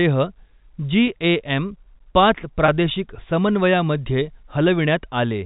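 Packet loss with pitch repetition occurs at 1.07 s and again from 2.66 to 2.68 s. About 10 ms, then 20 ms, of speech went missing, which fits one and then two lost packets. The receiver bridged each gap by repeating the last pitch period, heard as a brief, buzzy hold in the speech.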